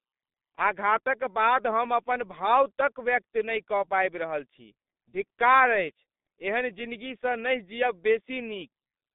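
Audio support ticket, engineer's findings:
G.723.1 codec, throughout: muffled speech, nothing above 3.8 kHz. Hoarse tone and smeared consonants, unlike plain band-limiting. Heavy damage, consistent with a 6.3 kbit/s mode.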